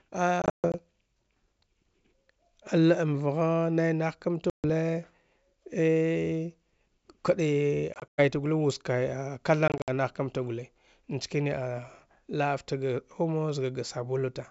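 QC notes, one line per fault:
0.42–0.75 s, 4.50–4.65 s, 7.94–8.20 s, 9.68–9.90 s: packet loss on an ADPCM call. Hard-edged silent gaps: 200 ms lost in scattered runs over 320 ms (longest 140 ms), a single 140 ms hole, 140 ms over 240 ms (longest 100 ms), and 120 ms over 200 ms (longest 60 ms). Unlike a plain dropout or gate, each return carries a click, a wrong level or brief distortion. This happens because the receiver's adaptive predictor and step size no longer match the sender's, and it settles within tens of milliseconds. The G.722 wideband coding at 64 kbit/s adds only faint damage of its own.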